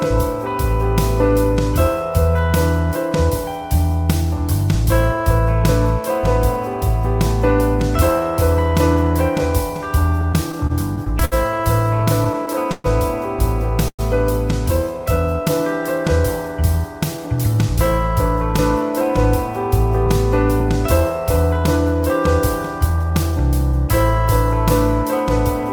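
The audio shows repeated stalls (stutter) between 10.21 and 14.01 s: 16 short gaps where the sound hangs and drags, totalling 453 ms, with the longest at 125 ms. This fill covers about 12% of that stretch. Unlike ordinary dropouts, nothing is lost. Each gap is bridged by continuing the last sound until delayed packets catch up with a jitter buffer that keeps running empty. From 22.90 to 23.88 s a jitter buffer speed-up makes the audio run at about 108% speed, so it sounds hurried. The pitch stays the same, which separates it from a resampling or clock-rate error that would raise the pitch too. The buffer had built up excess delay and trimmed it away by cutting roughly a tenth of a second in small pitch-period pieces.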